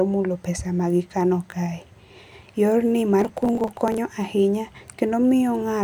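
A speech clip with processor overload crackle from 3.20 to 3.98 s. A gritty burst of crackle tears across the speech. The processor is missing dozens of deadlines again and again over this stretch. Each miss skips a tiny slice of audio, which fits a buffer well under a millisecond long. The crackle stops when the load eases.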